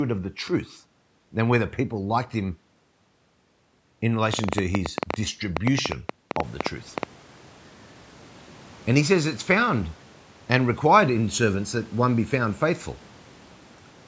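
From 4.34 s to 7.04 s a train of clicks ticks and pops over the speech and through its pauses, about 8.9 clicks per second at an uneven pace, roughly thirty in all and peaking around 15 dB above the speech. The pulses share much the same shape, which likely points to interference from nearby equipment or a faulty connection or power supply. Near 6.5 s the room noise grows louder, but it stays well below the speech.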